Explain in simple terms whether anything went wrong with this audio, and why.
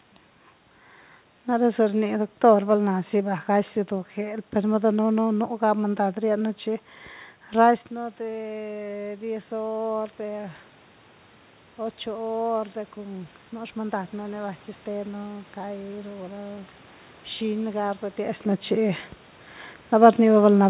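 From about 7.9 to 10.6 seconds, the voice and the room noise behind it slowly swell louder together over almost three seconds. This is automatic gain rising. Just before it, around 7.5 seconds, the talker moved away from the microphone and the sound became much quieter. The call's automatic volume control noticed and gradually turned itself up to compensate, and that also raised the background noise along with the voice.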